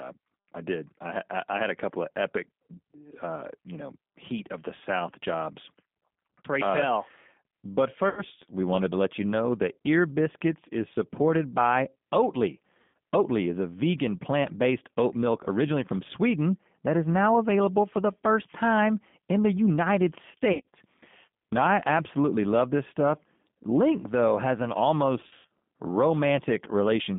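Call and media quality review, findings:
G.729 codec throughout: band limited to 150 Hz–3.6 kHz, rough synthetic texture. Constant, not intermittent like the loss events, and fits 8 kbit/s CELP reconstruction.

VoIP packet loss concealed by the speech codec: 8.09–8.23, 12.82–12.93, 20.53–20.75 and 25.21–25.46 s. Buzzy tone or coloured noise, fading and extrapolated, instead of silent gaps, with weak recovery afterwards. Worst at 25.2 s.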